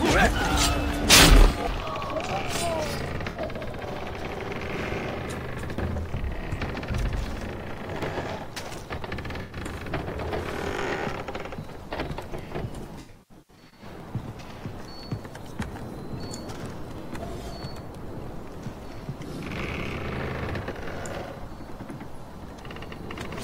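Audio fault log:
3.29–3.39 s, 9.41–9.56 s, 13.0–13.84 s, AAC frame loss with concealment: gaps of 64 ms and 85 ms, then 512 ms scattered over 0.77 s, are patched from the last good spectrum, sounding smeared and noisy. Spectrograms show blurred, streaky patches; waveforms show dulled envelopes.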